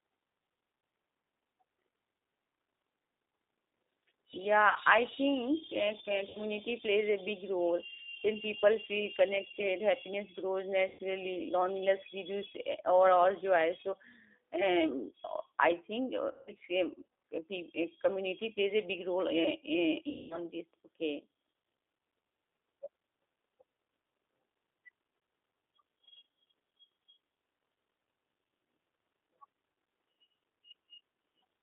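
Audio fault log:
Throughout: G.729 codec. The speech is carried at 8 kbit/s inside a 300 Hz to 3.7 kHz band. Each frame is rebuilt from a vocal tract filter and a few pulses. The voice sounds dull, slightly rough and plainly synthetic.
4.69 to 4.77, 6.29 to 6.40, 10.89 to 11.02, 16.31 to 16.53 and 20.10 to 20.38 s: VoIP packet loss concealed by the speech codec. Between 60 and 200 ms of audio goes missing each time. The decoder stretches its last sound into a fading buzz or coloured noise. The voice stays weak briefly afterwards.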